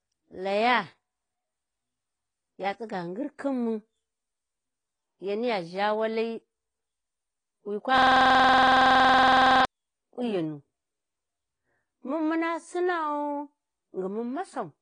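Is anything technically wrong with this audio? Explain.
Yes, there are two problems. Throughout the speech, the encoder has likely been starved of bits by AAC compression at a low rate, around 24 kbps, which trims the spectrum and coarsely quantises it. Nothing survives above about 9.7 kHz, so the audio sounds dull and smeared, with a fizzy, warbling edge on sibilants.

From 7.98 s to 9.65 s, a system hang loop occurs. The system froze while the audio hardware kept replaying the same 46.44 ms buffer, which fits a 2048-sample buffer. That slice repeats dozens of times at 21.5 Hz, producing a rapid, mechanical stutter.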